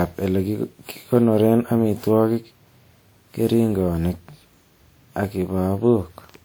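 Speech clip with generation loss throughout, likely from repeated WMA re-encoding around seven times at what fits 96 kbit/s, stacking swirly, hollow smearing and blurred attacks, with nothing above 20.1 kHz.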